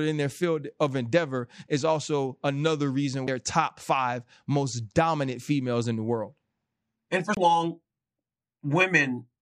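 At 3.27 s and again from 7.35 to 7.37 s the speech shows a CD skip: the laser jumped tracks, so playback mutes briefly, a few milliseconds then about 20 ms, and resumes elsewhere on the disc. Waveforms show a flat gap and abrupt discontinuity; spectrograms, a thin vertical broadband line.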